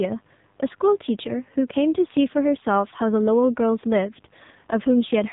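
Throughout, it's an AMR narrowband mobile codec: nothing above 3.8 kHz, and heavy synthetic buzz from a starved pulse-driven voice model, pointing to roughly 6.7 kbps.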